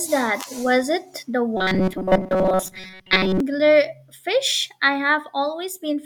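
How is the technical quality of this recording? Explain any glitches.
The recording has one clear glitch. Robotic sound from repeated short buffers runs from 1.57 to 3.40 s, starting just after "it the". The likely cause is new audio arriving too seldom, so playback fills the gaps by looping a very short slice while the real audio is skipped. The 188 Hz buzz fits a slice of about 5.3 ms. Most of that stretch is repeated material, heard as a rigid, metallic drone that only loosely tracks the speech.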